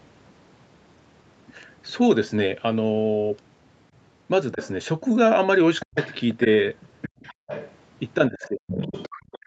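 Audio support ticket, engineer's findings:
Other side's voice leaking through at 4.52–4.70 s, about 20 dB under the talker, and again from 5.8 s to the end at about 15 dB under. Likely residual loudspeaker echo left by the echo canceller. The far voice rides beneath the near talker.

Speech suppressed in double talk. Brief dip at 4.54–4.59 s, roughly 10 dB. Deep cut at 5.85–5.98 s, around 40 dB. From 8.29 s to the end, drops of roughly 35 dB. Likely the canceller confusing near speech with echo and attenuating both.

Background gated by the echo canceller at 7.09–7.47 s. Room sound falls by about 38 dB, around 300 ms in total, then returns. The canceller clamps the microphone hard while the loudspeaker plays and releases when it stops.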